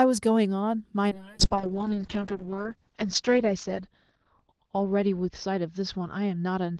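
From 1.13 s the speech turns rough and muffled, losing everything above 6 kHz: a call bitrate drop, fitting an Opus fall from 32 to 6 kbps.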